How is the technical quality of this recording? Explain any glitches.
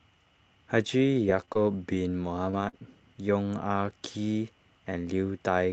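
The recording carries one glitch, a cluster of scattered short gaps in the speech between 1.35 and 2.75 s, heard over a call path whose top end stops near 8 kHz.

Scattered short gaps, 1.35–2.75 s: about four lost or late packets, the longest around 40 ms, leave 100 ms missing. The receiver covered 160 ms by stretching the preceding sound, so brief ticks and smeared hiccups appear. Unlike one long dropout, these are tiny, separate patches across the span.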